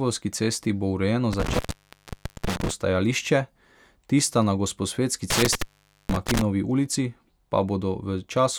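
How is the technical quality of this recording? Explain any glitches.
The recording is marred by two intermittent contact faults in the speech. From 1.33 to 2.70 s, just after "cesti bo urejeno", the line opens for about 0.86 s; from 5.30 to 6.41 s it opens for 0.47 s. A loose plug or cable breaks the connection, so the audio cuts to faint hiss with crackle at each edge. That crackle separates it from a digital dropout's clean silence.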